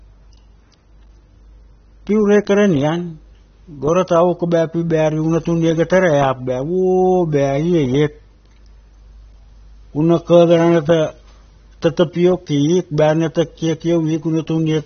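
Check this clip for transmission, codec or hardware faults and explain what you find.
One codec fault runs through the whole clip. The speech has nothing above 6.3 kHz and sounds dull and smeared, with a fizzy, warbling edge on sibilants. The likely cause is AAC compression at a low bitrate, around 24 kbps. The encoder drops upper bands and coarsely quantises what remains.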